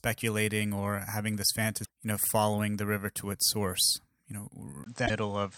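Damaged data in a compressed stream hits this speech recording twice, at 1.81 to 1.88 s, between "or having this" and "you know following the", and at 5.03 to 5.11 s. Each time the decoder loses sync on corrupted frames. From 4.84 s to the end, a 20 ms dropout is followed by narrower, duller sound with nothing above 8.4 kHz and a new noise floor roughly 30 dB down at about the same level, most likely an input switched to a poorer device.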